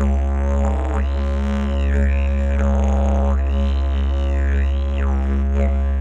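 No technical faults can be heard in these sounds.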